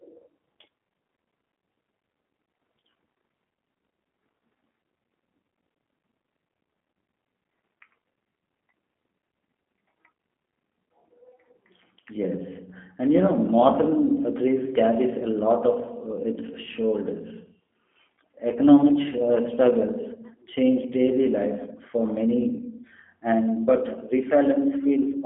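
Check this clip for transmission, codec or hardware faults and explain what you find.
Yes, one fault runs through the whole clip: G.729 codec damage. Speech rebuilt from a vocal-tract model and sparse pulses sounds rough and synthetic, with nothing above 3.8 kHz; plain band-limiting would sound dull but clean.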